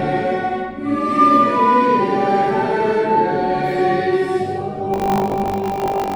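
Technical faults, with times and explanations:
4.92–6.15 s, buffer tearing: the program filling the ring buffer and the hardware reading it have drifted out of step, so the read position crosses the write position inside every period, which fits a 20 ms period. In each period a small slice, around a sixth, is replaced by audio from roughly 70 ms earlier, with abrupt joins on either side. Those repeated splices produce a steady robotic 50 Hz buzz riding on the sound until the end.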